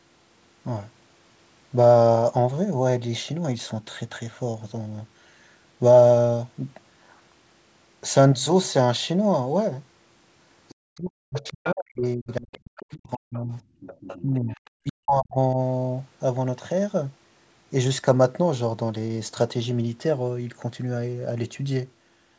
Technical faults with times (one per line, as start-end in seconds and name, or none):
10.69-10.75 other side's voice leaking through
10.74-13.53 speech suppressed in double talk
11.47-11.75 other side's voice leaking through
12.29-12.58 other side's voice leaking through
13.35-13.39 other side's voice leaking through
13.80-14.92 other side's voice leaking through
14.22-15.58 speech suppressed in double talk